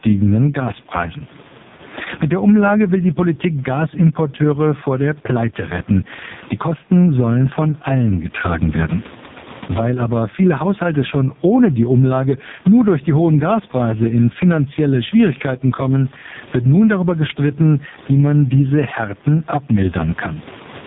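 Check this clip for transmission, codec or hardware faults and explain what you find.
Two faults run through the whole speech recording.

Gain pumping: the level swings by around 20 dB. Loud and soft parts are pulled closer in level and the sound is squashed, likely from excessive input gain feeding a fast limiter.

AMR narrowband mobile codec: nothing passes above 3.8 kHz, and the voice sounds heavily buzzy and synthetic, which fits AMR-NB at its lowest rate, around 4.75 kbps. The quiet room noise also takes on a warbling quality.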